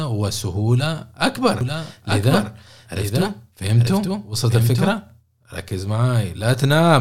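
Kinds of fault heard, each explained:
Doubled audio track: from 1.61 s to 4.99 s the speech plays twice, a dry full-band copy trailing by about a second and roughly 5 dB quieter, likely from a slower second capture path. Spectrogram and waveform show every pattern repeated, shifted right, starting and stopping abruptly.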